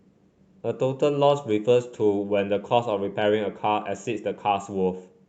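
No faults found in this speech recording; the call path limits the top end to around 8 kHz, consistent with Opus running at a wideband setting.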